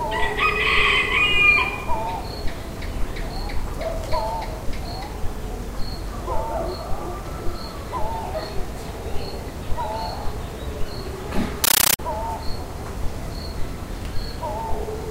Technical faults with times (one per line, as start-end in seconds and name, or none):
11.64-11.99 compressed stream played as audio